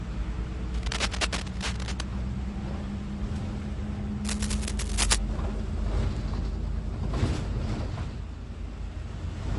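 Throughout the clip the sound has a watery, swirling quality. Transients are smeared and bright detail chirps metallically, and nothing is present above 11.3 kHz. This is likely MP3 compression at a low bitrate, which the damage suggests is around 48 kbps. Short of bits, the encoder drops the top band and zeroes quiet frequency lines frame by frame. On a spectrogram this shows as a hard ceiling at 11.3 kHz, with patchy, flickering holes in the upper bands beneath it.

From 0.74 to 2.02 s, a burst of rough scratching and rustling sits a little below the main sound, at about 5 dB under it. A second burst from 4.24 to 5.16 s is as loud as the sound itself. Both are likely cable scratch noise: a worn cable, connector or control being moved, so that its contact resistance jumps rapidly. On the waveform each burst appears as a dense band of jagged, irregular spikes. On a spectrogram it shows as broadband vertical streaks.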